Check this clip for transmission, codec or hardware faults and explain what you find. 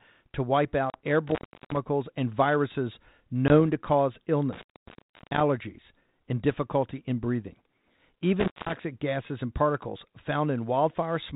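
Two kinds of fault are present, packet loss on an ADPCM call and an intermittent contact. Both sit on top of light G.726 ADPCM coding that fits a 32 kbit/s link, with nothing above 4 kHz.

Packet loss on an ADPCM call occurs at 0.90 s, a 40 ms hole of about two packets, and at 3.48 s, a 20 ms hole. The sound drops to hard-edged silence. Afterwards the decoder's predictor and step size lag the sender's, so the audio returns slightly distorted, recovering by 0.96 s and 3.55 s.

The intermittent contact occurs three times. From 1.27 to 1.77 s it is open for 0.36 s, just before "and viruses". From 4.53 to 5.40 s it is open for 0.69 s, right after "to cause". From 8.40 to 8.74 s it is open for 0.19 s, just before "gases and particles". Each time a loose connection briefly breaks the signal path, cutting the sound out with crackle at both edges and leaving faint hiss in the gap.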